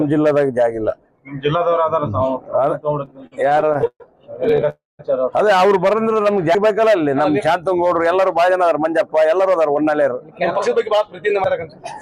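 The audio drags and stutters from 3.05 to 4.02 s, with sixteen brief stalls (the longest 131 ms) that stretch the last sound, so about a third of that span is filled-in sound. Another six tiny hiccups of up to 14 ms follow between 4.44 and 4.67 s. These are repeated stalls (stutter): packets reached the jitter buffer late or too slowly, it kept running dry, and the receiver extended what it last had rather than losing anything. Right after, from 4.69 to 5.01 s, the sound hangs as a fading tail and then drops to about 180 ms of silence before resuming where it left off. That is a call audio freeze, which adds roughly 0.3 s of gap, likely because packets were held up in transit and the buffer emptied completely. At 6.55 s and again at 11.44 s there is an abrupt jump forward, skipping about a tenth of a second and about 70 ms respectively, with no silence between. Each is a dropped buffer (overrun), likely from the software failing to read samples before the hardware overwrote them. 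From 8.18 to 10.95 s everything runs about 8% fast at unchanged pitch and sounds hurried. This is a jitter buffer speed-up, trimming roughly 0.2 s of pitch-period slices to shed the delay built up earlier.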